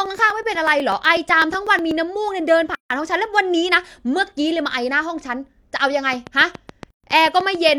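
From 0.06 to 1.91 s, periodic USB or driver dropouts: a blocked bus or driver skips roughly a millisecond of speech every 0.124 s, leaving about fifteen evenly spaced ticks. At 2.75 to 2.90 s there is a gap at a join of encoded pieces. Separately encoded four-second sections were joined with their encoder delay and padding left in, opening a 155 ms silence with smeared edges before the speech resumes. From 6.13 to 7.70 s comes a train of clicks, likely from interference or a faulty connection: about ten regular clicks at roughly 7 per second, peaking about 5 dB above the speech. Within that stretch, from 6.90 to 7.04 s, another join gap cuts in for 133 ms.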